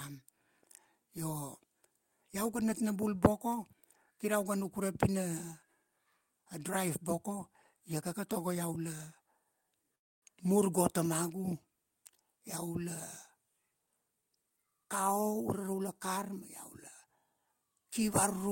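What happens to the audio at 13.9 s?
At 13.86 s a jitter buffer speed-up begins and lasts until 15.81 s. The receiver's buffer had filled beyond its target, most likely after a burst of late packets arrived together, so it trimmed out short slices of one or a few pitch periods over and over, about a fifth of a second in all. The speech plays at roughly 111% speed without any change in pitch and sounds noticeably hurried through that stretch.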